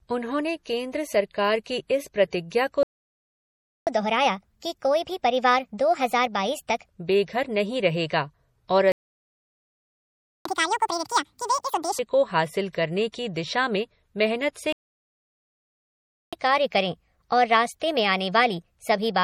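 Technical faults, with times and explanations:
Throughout: low-bitrate audio saved at a high bitrate. The speech was likely first squeezed through a low-bitrate MP3 encoder, which fits a rate around 40 kbit/s, and then re-encoded as a high-bitrate MP3. The second pass cannot restore what the first threw away, so the thin, smeared, swirly texture stays.
2.83–3.87 s, 8.92–10.45 s, 14.73–16.33 s: playback stall. The player likely ran dry of data, or its thread was held up, and the output dropped to silence until it recovered. The speech cuts off in mid-flow for about 1.04 s, 1.53 s and 1.60 s, with the third gap coming right after "में मेहनत से".
3.87–6.87 s, 10.45–11.99 s, 16.33–19.23 s: catch-up at higher speed. After each stall the player works through its backlog by resampling faster, so tempo and pitch rise together. The first run plays at 1.25 times speed, about four semitones sharp. 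The second, following "बेघर नहीं रहेगा और" and ending just before "को हासिल", runs at double speed and sounds nearly ten semitones high, almost chipmunk-like. The last runs at 1.15 times speed, about two semitones up.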